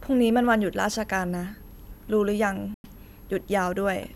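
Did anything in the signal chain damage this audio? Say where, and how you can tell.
Yes. The speech drops to silence at 2.74 s and comes back at 2.86 s, with a dead gap of 99 ms inside that span. This is a Bluetooth stall at the wireless link. The sound cuts out cleanly rather than fading or smearing, which points to the headphones' buffer emptying. The likely cause is radio interference holding back packets, so playback paused until retransmitted data arrived to refill the buffer.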